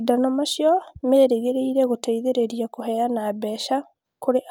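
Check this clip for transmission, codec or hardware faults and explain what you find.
No transmission, codec or hardware faults turn up anywhere in this speech recording.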